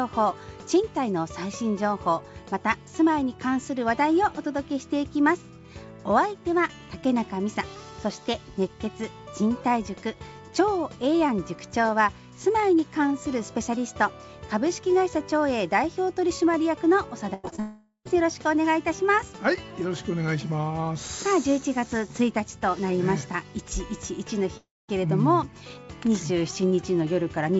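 This is a call recording, and the band stops at 8 kHz, which fits G.722 at 64 kbps on a WebRTC path. The trouble starts with a burst of packet loss from 17.34 to 17.45 s. About 100 ms never arrived, so the receiver stretched the last sound into a fading buzz or hiss and then jumped ahead past the missing bit. Right after that come two short concealed packet losses at 17.49 and 17.56 s. Each is roughly 20 ms patched over, heard as a quick smear or wobble as the filler blends back into the real audio. Then the sound cuts out twice, each gap heard as a fading tail and then silence, most likely a long network dropout. The first runs 17.60 to 18.07 s, losing about 460 ms with around 90 ms of silence at the end. The second runs 24.57 to 24.90 s, losing about 320 ms, and about 220 ms of it is silent.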